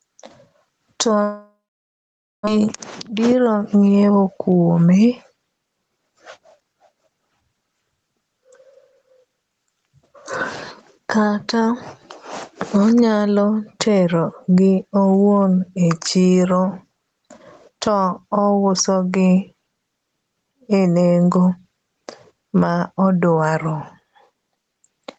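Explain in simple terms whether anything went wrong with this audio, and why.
Three things went wrong in this speech recording.

The first is gain pumping, and it lasts the whole clip. The level swings by a large amount. Loud and quiet parts end up squeezed together. The likely cause is a microphone level set far too high, with an automatic limiter constantly pulling it back down.

The second is a long network dropout, from 1.23 to 2.49 seconds. Audio stopped arriving. At first the receiver stretched out the last sound, which fades away. Then there is near silence for about 0.9 seconds. When speech returns, about one second of it is simply gone. It also comes back running about 0.2 seconds later than before. A break in the network connection is the likely cause.

The third is a jitter buffer speed-up, from 3.07 to 4.29 seconds. After the dropout, the receiver had more audio waiting than it wanted. 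It caught up by cutting out many tiny slices of speech. In total it removed roughly a fifth of a second. The speech plays at about 114 percent speed, so it sounds rushed. The pitch of the voice does not change.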